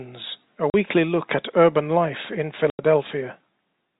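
Hard-edged dropouts cut the speech at 0.70 to 0.74 s and 2.70 to 2.79 s: packet loss filled with silence, with 40 and 90 ms gaps that fit 10 ms packets.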